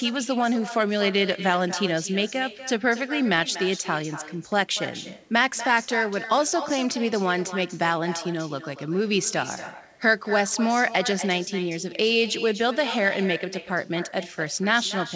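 Throughout, there is echo with no canceller. The far end's loudspeaker feeds its microphone, so each phrase returns about a fifth of a second later, roughly 13 dB quieter.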